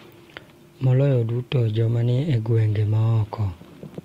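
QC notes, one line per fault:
The speech signal is intact, with no audible technical faults anywhere in the clip.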